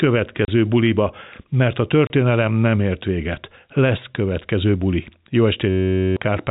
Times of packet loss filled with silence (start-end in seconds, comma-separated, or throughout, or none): 0.45-0.48, 2.07-2.10